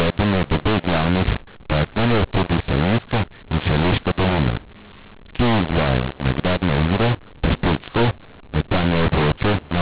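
From start to finish the speech has the mu-law and A-law mix-up: it was coded as A-law but decoded as mu-law, so sample levels land wrong. It sounds harsh and gritty, and the pauses fill with hiss. The 4 kHz ceiling fits ordinary G.711 telephone coding.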